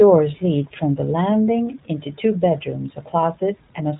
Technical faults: iLBC codec

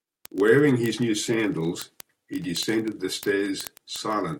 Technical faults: word clock ticks

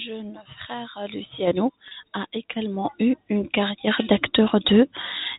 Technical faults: packet loss with pitch repetition; chunks out of order

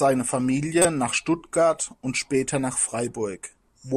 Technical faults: corrupt frame decoded

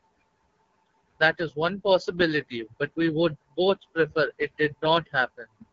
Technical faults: AMR wideband (HD Voice) codec

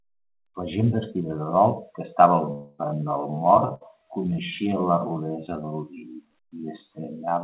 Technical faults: time-stretched section; long network dropout; burst of packet loss; short concealed packet loss

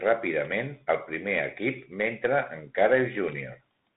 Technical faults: Bluetooth CVSD headset codec

